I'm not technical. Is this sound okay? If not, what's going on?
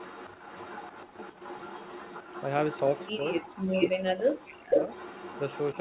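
No. Echo leak: a faint delayed copy of the speech, trailing just under half a second behind, runs from 0 to 2.49 s, 2.66 to 3.12 s and 4.74 to 5.81 s, with short bursts at 3.31 to 3.42 s and 3.8 to 3.89 s. The last burst is briefly louder than the speech itself. Likely a loudspeaker's sound is leaking back into the call. Unlike a room's natural reverberation, this is a distinct repeat with a fixed delay.

Speech suppressed in double talk: the speech dips or drops out briefly at 3.14 to 3.24 s and 5.74 to 5.78 s. From 3.8 to 4.89 s it nearly vanishes for about a second. This likely happens when both sides talk at once and the call software turns everything down. Unlike a network dropout, the gaps occur only while the other side is also talking.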